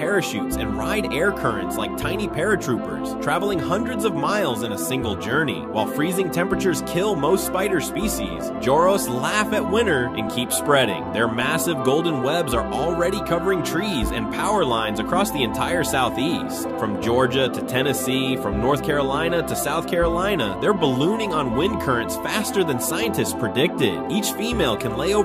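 No technical faults can be heard anywhere in this audio.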